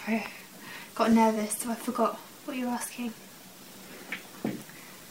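No technical faults are audible.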